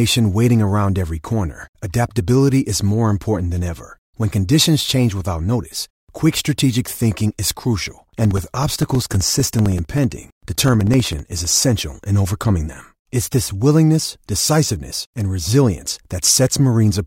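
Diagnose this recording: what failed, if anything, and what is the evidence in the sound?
Periodic USB or driver dropouts at the driver or buffer stage: from 7.86 to 11.51 s the speech carries evenly spaced ticks every 64 ms, each a gap of about 2 ms filled with silence. Network packet loss would instead leave irregular gaps.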